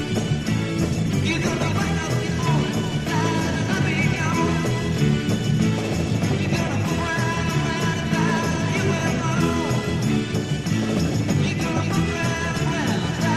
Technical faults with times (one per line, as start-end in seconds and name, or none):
0.00-2.00 adaptive stream starting at a low bitrate